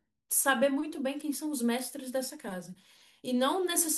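Speech with no audible faults.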